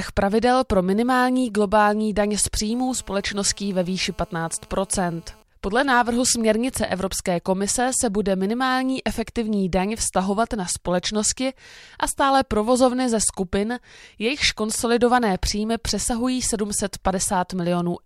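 From 2.70 to 5.43 s, just after "minimální globální daň z", there's a GSM phone buzz: a nearby 2G handset bursting 217 times a second, rectified into a steady raspy buzz about 32 dB down, ending before "podle návrhu směrnice".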